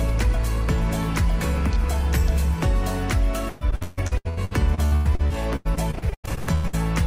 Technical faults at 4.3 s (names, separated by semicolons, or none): repeated packet loss (robotic sound)